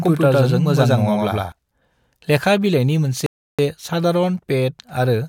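From the start of the clip to 1.52 s, a doubled audio track is already under way. A second, equally loud, full-band copy of the speech trails the original by about a tenth of a second, with no reverberant tail. It is likely a second capture path or a misaligned edit. The copy drops out abruptly at 1.52 s.

At 3.26 s a rebuffering stall occurs. The player ran out of buffered data, so the speech cuts to silence until 3.59 s and then resumes exactly where it stopped. Nothing is missing, but the gap adds 0.32 s to the clip.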